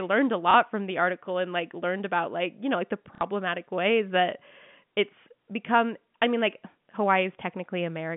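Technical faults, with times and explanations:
0.51 to 0.54 s and 3.15 to 3.21 s, packet loss with the last packet repeated: audio dropped out and the receiver filled each gap by replaying the last good chunk, 30 ms the first time and 60 ms the second. The 30 ms repeat length points to 30 ms packets, so the second gap is likely two lost packets. The longer gap turns into a brief buzzy stutter at roughly 33 Hz over the narrow telephone band.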